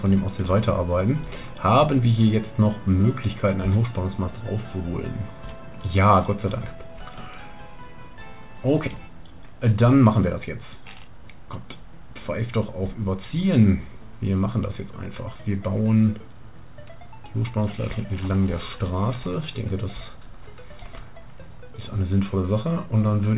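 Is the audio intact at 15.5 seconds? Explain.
Yes, the audio is intact at 15.5 seconds, with nothing there beyond the ordinary sound of the WebRTC call path, whose G.711 mu-law coding carries nothing above 4 kHz.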